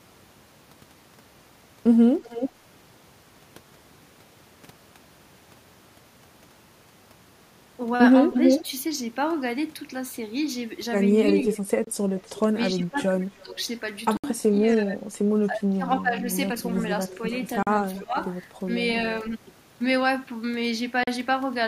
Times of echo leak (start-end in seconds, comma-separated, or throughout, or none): 2.24-2.50, 8.33-8.65, 11.29-12.40, 13.59-14.75, 16.59-18.24